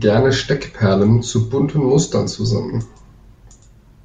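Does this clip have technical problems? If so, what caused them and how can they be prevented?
No, no technical faults are audible.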